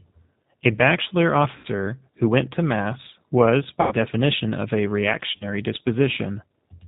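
Across the whole clip the speech carries the G.729 codec sound, plainly audible at 8 kbit/s. The voice is rebuilt from a vocal tract filter, a pitch predictor and a few coded pulses per short frame, so it sounds intelligible but rough and faintly synthetic. On a spectrogram everything stops at a hard ceiling near 4 kHz, with empty space above, and the harmonics below look slightly blurred and grainy rather than clean.

At 1.56 to 1.67 s, 3.81 to 3.95 s and 5.36 to 5.46 s there is VoIP packet loss concealed by the speech codec. The decoder, missing roughly 80 ms, 100 ms and 40 ms of audio, consistent with runs of 10 ms frames, repeats its last pitch and filter at falling gain. The speech smears into a buzzy tone or coloured noise that fades, and stays weak briefly afterwards. On a spectrogram the harmonics freeze into flat horizontal bands, and the waveform envelope tapers before recovering.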